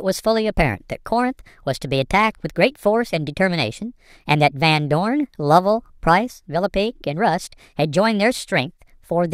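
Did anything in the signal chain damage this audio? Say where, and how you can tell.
Yes, a wrong sample rate at the playback stage, running through the whole clip. The speech comes out about 1.38 times too fast and roughly 5.55 semitones high, speed and pitch shifted together, which fits 32 kHz material played at 44.1 kHz with no resampling.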